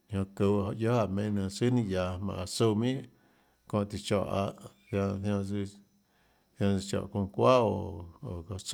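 No technical faults can be heard at any point in the speech, so there are none to describe in time order.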